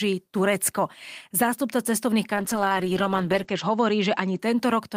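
From 2.34 s to about 4.45 s there's a call bitrate drop: the connection's bandwidth estimate sagged, so the encoder coded the speech much more coarsely, which fits a fall from around 32 kbps to about 11 kbps. The top end narrows from 20 kHz to 8 kHz, giving a muffled, watery sound that's roughest for about 1.2 s before recovering.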